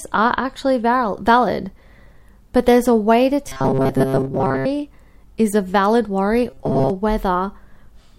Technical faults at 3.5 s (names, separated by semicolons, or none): robotic sound from repeated short buffers